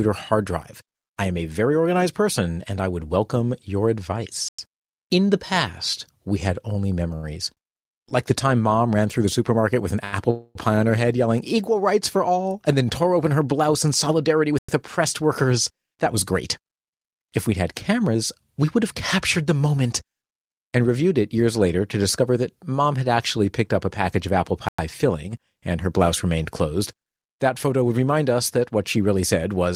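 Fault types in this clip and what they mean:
Gap between chunks: at 4.49, 14.59 and 24.69 s the speech drops out for 100 ms, once every 10 s, the last between "a package of apple" and "filling and her blouse". The audio was delivered in 10-second pieces and each join was played with a short silence before the next piece started. Nothing is lost. The flow is simply broken at each boundary, giving a clipped, stuttering hole on a regular beat.
Short stall from a late packet: at 7.15, 7.53, 8.09 and 10.04 s a sound is held for 76, 38, 17 and 80 ms. Each time a packet reached the receiver late and its jitter buffer ran dry, so it stretched the last sound until the data came in and then resumed exactly where it left off. No speech is missing, but each moment sounds briefly frozen, with a faint buzz or dip.
Call audio freeze: from 10.30 to 10.57 s, just before "pie on her head", the speech stops moving forward for about a quarter of a second. 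The receiver fills 247 ms by extending the last sound into a fading buzz or hiss that ends in about 30 ms of silence. This is likely a burst of held-up packets emptying the jitter buffer. When they arrive the speech carries on intact, with the pause inserted.
Jitter buffer speed-up: from 14.45 to 18.16 s, between "open her blouse in" and "we would have captured", the speech runs about 5% fast, and from 22.22 to 22.87 s about 8% fast, with the pitch unchanged. Too much audio had built up in the receiver's buffer, so it trimmed many tiny pitch-period slices to catch up. About 150 ms and 70 ms are removed, and the delivery sounds slightly hurried.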